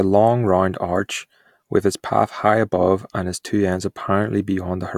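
Speech runs through the recording with no audible dropouts, clipping, distortion, noise bursts or level jumps at any point.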